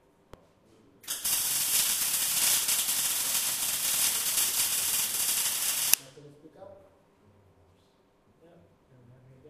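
At 0.34 s and 5.94 s, damaged data in a compressed stream makes the decoder misread corrupted frames, giving brief glitches such as a chirp, squawk, click or short hole.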